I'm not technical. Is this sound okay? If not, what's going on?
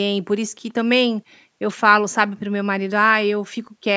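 No. Between 0.69 and 0.73 s there's a very faint, brief ghost of the voice, a quiet scrap repeating what was said a little less than half a second earlier. This is most likely an echo leak. Someone on the call was using a loudspeaker, their microphone caught the sound coming out of it, and their echo canceller didn't remove all of it, so a weak delayed copy was sent back into this recording.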